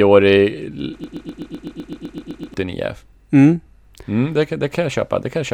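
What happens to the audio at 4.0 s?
Nothing goes wrong at 4.0 s; the speech there plays through intact, with no audible fault.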